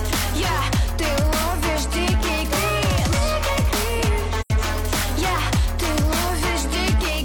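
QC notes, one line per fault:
4.41–4.50 s, AAC frame loss with muting: a short run of coded frames never reached the decoder, and it filled the gap by zeroing the spectrum for those frames. About 85 ms of content is missing, which fits two consecutive frames. Because the overlapping transform windows still crossfade into and out of the silence, the sound dips away and returns smoothly, a soft-edged hole.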